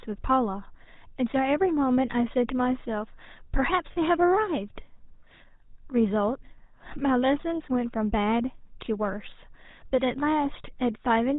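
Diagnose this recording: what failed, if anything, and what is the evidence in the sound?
The codec stage fails throughout: the GSM full-rate codec leaves nothing above 4 kHz and a buzzy, gravelly roughness on the speech, consistent with 13 kbps. A simple band-limit would sound dull but clean. This grit comes from pulse-driven, decimated excitation feeding a vocal-tract model.

Lost GSM frames occur in the network or radio stage from 3.92 to 3.97 s. About 40 ms of sound is held as a rough, metallic ring, which fits two missing frames. A plain dropout would go silent. Here the decoder repeats the last good frame's settings.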